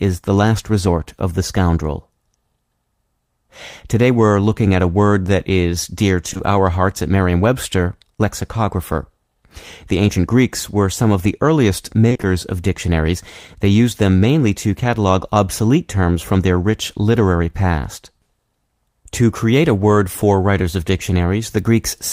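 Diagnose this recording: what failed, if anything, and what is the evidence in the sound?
Network stage: short concealed packet loss at 6.29, 6.33 and 6.37 s, after "word that is dear". The decoder continues earlier sound over 20 ms holes, leaving a brief smear.

Network again: repeated packet loss (robotic sound) from 12.09 to 12.25 s, before "of dictionaries". Concealed holes up to 20 ms fill half that span, chopping the sound.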